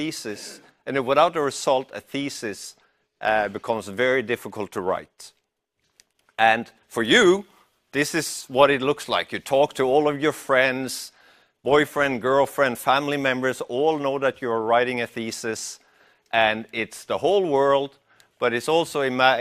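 No technical faults can be heard anywhere in the audio.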